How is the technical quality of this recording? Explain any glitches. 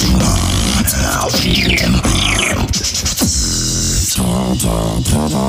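Two glitches of one kind affect the recording. Bluetooth stutter occurs at 1.51 to 1.55 s and again from 3.72 to 3.92 s. Audio packets arrived late or not at all, so the receiver replayed its last slice until fresh data came. The first repeats about 23 ms once, a brief blip. The second loses about 139 ms scattered over roughly 186 ms, longest run near 70 ms: a short machine-gun buzz before the sound jumps ahead.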